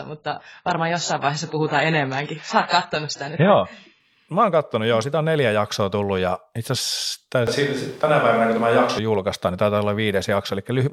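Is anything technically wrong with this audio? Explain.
Yes. From the start to 4.0 s the player is on a low-bitrate version of an adaptive stream, as an adaptive stream starting at a low bitrate does. Nothing is present above 7.6 kHz and codec artefacts are stronger, which fits roughly 16 kbit/s AAC. At 4.0 s the quality jumps up suddenly with no gap.

From 7.47 to 8.99 s, after "tullut ja itse asiassa" and up to "julkaistaan niin taitaa", the close microphone's signal was likely dropped and a farther one used: a switch to a distant microphone. The voice turns roomy and hollow with less bass, at about the same level, and room noise rises to about 30 dB below the speech. The change happens abruptly at both ends.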